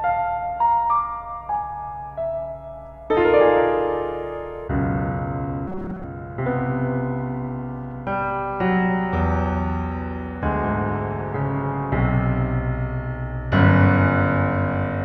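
From 5.68 to 6.04 s the sound turns into robotic sound from repeated short buffers: a rigid, metallic buzz fixed at 188 Hz that only loosely tracks the underlying audio. The likely cause is that fresh audio stopped arriving in time, so playback kept looping a fragment of roughly 5.3 ms while the real signal was dropped. Most of that stretch is repeated material, and the repetition rate itself sets the buzz pitch.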